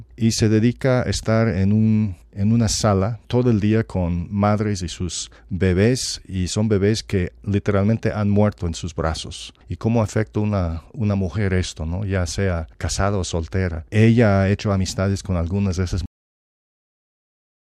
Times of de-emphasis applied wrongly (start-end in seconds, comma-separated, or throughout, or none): none